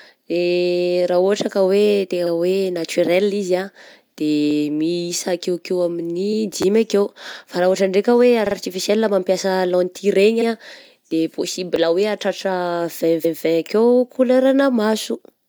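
At 2.25 s the audio stutters: a repeated frames fault, where a 46 ms block of compressed frames is decoded twice, adding 46 ms. A waveform shows the same short shape twice in a row, and a spectrogram shows a duplicated slice. At 4.51 s a repeated buffer fault gives a quick click, as a 10 ms buffer is replayed once when new audio arrived late. It appears as a tiny identical waveform segment with a hard edge. The same frame stutter returns at 6.32 s. From 6.62 to 6.64 s the buffer plays twice more, heard as a brief buzz and seen as a short periodic pattern. At 8.45 s the 46 ms block plays two extra times, adding about 93 ms and looking like three matching spectrogram slices. A single repeat follows at 10.40 s. Another buffer click comes at 11.76 s. From 13.24 to 13.38 s a longer 139 ms block of frames repeats, a stutter showing as a copied stretch of spectrum.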